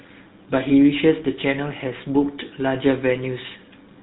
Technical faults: GSM full-rate codec

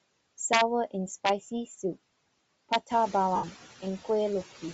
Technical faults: noise suppressor artifacts; Bluetooth LC3 compression; integer overflow; lost LE Audio frames

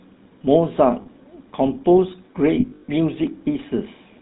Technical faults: GSM full-rate codec; lost GSM frames

